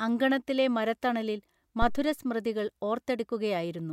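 At 1.82 s, right after "അങ്കണത്തിലെ മരത്തണലിൽ", a phantom power thump breaks into the speech and lasts until about 2.12 s. A supply switched on or off on the live input sends a sudden DC step through the coupling capacitors, heard as a deep low thud peaking around −16 dBFS that dies away over roughly 66 ms. On the waveform it appears as one large, lopsided excursion with an exponential tail; a spectrogram shows a dark vertical band concentrated at the lowest frequencies.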